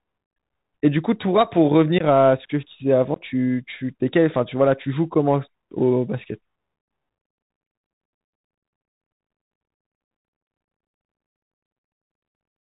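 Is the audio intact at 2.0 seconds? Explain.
No. Around 1.98 to 2.03 s, a handful of voice packets between headset and phone went missing over the link, unconcealed Bluetooth headset packet loss, and nothing filled the gap. About 19 ms of speech drops out in abrupt-edged holes, and the speech returns briefly quieter. Underneath, the Bluetooth CVSD headset codec is at work: its one-bit up-or-down coding at 64 kHz, with an adapting step size, cuts everything above 4 kHz, scratches sibilants, and leaves a granular hiss under the speech.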